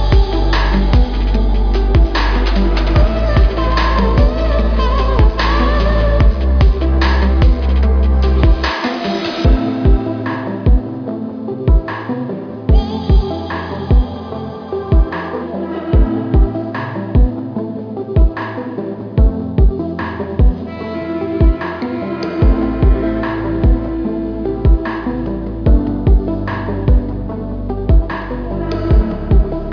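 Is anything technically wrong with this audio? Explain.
Yes. Aliasing runs through the whole clip. The high frequencies fold back around 5.5 kHz, which fits a drop to an 11 kHz rate with no anti-alias filter first. The result is a gritty, metallic tone on top of the sound, folded at roughly 25 dB below the signal, with the spectrum packed hard up to the band edge.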